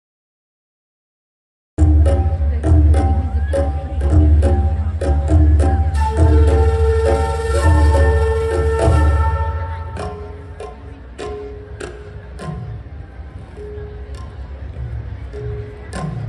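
From 0 to 1.78 s there is digital silence, then a cut-off start: capture began late, so sound enters mid-event with no attack, unlike a gentle fade-in.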